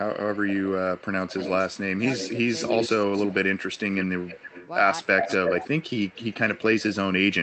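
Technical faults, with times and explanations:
0.13–3.34 s, 3.74–4.69 s and 5.17–6.6 s: echo leak. A fainter copy of the speech trails it by about 296, 302 and 307 ms, roughly 10, 20 and 5 dB below the speech. The spectrogram shows ghosted, time-shifted harmonics. Likely cause: loudspeaker pickup the echo canceller didn't fully remove.
1.93–1.98 s, 4.01–4.28 s and 5.01–5.65 s: speech suppressed in double talk. The speech dips by roughly 15, 20 and 15 dB, briefly at first, then for a few hundred ms. The waveform shows notched envelopes and the spectrogram thins there, likely because the canceller attenuated both talkers at once.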